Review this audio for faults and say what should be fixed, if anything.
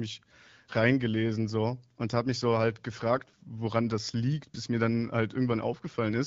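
The speech passes through the AMR wideband (HD Voice) codec at 12.65 kbit/s, a rate that keeps it clear with only light coding damage, and nothing in the signal needs fixing.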